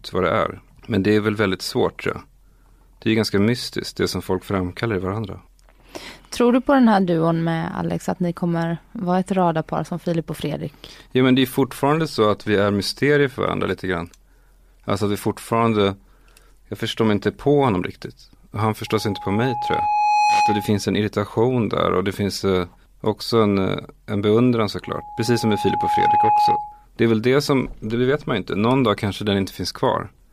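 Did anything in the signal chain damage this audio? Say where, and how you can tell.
Yes. Loudspeaker feedback squeal, 18.87–20.84 s (ending before "en irritation där och") and 24.84–26.86 s (after "en eh en beundran"): an 836 Hz tone builds over about 1.5 s to about 5 dB above the speech. The microphone is picking up its own loudspeaker, and the loop gain exceeds one at that frequency.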